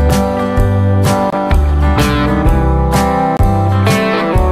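Brief silent holes at 1.30 to 1.33 s and 3.37 to 3.41 s, likely a Bluetooth dropout: about 23 ms missing, fitting one lost frame, resuming as if it had played on.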